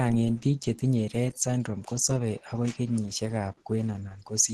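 From start to finish the speech shows plainly audible damage consistent with low-bitrate codec processing, most likely Opus compression. Nothing is present above about 12.1 kHz, a super-wideband ceiling, and the voice has the muffled, hoarse texture of the encoder's hybrid speech mode, in which a speech coder handles the lower band and band energies are coarsely filled above it. The grain and thinness point to a rate somewhere around 16 kbps.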